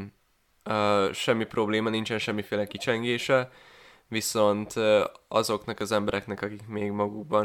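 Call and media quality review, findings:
CD scratch ticks in speech, 5.51 to 6.68 s. Five short clicks, about four per second, longest about 2 ms. Probable source: optical disc read chain, damaged surface. Mechanism: a blemish wipes out more data than error correction can rebuild, once per disc revolution. The player interpolates or mutes the lost samples, producing a regular tick train.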